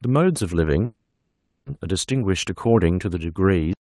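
At 0.85 s the speech stops moving forward. This is a call audio freeze. The last sound carries on as a fading buzz. It decays into silence for about 210 ms. Normal audio returns at 1.68 s. The held stretch lasts 810 ms. The likely cause is packets held up in transit, leaving the jitter buffer empty. When the speech resumes, it picks up exactly where it stopped. Nothing is lost. Everything after that point simply arrives 810 ms late.

At 3.73 s the clip has a cut-off end. The audio halts in the middle of a sound. There is no natural decay or tail. The sound drops straight to digital silence. The final buffers were never written or played out, so the recording just ends. The effect is abrupt and unfinished.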